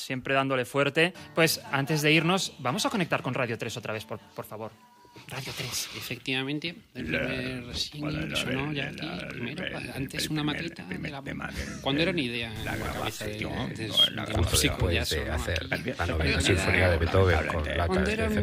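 From 12.56 to 13.26 s a harsh, buzzy distortion appears, likely from a stuck bit: one data bit held fixed, shifting about half the samples by a step near -40 dBFS. Unlike clipping, which only affects peaks, it corrupts low-level samples too, adding noise beneath quiet sound.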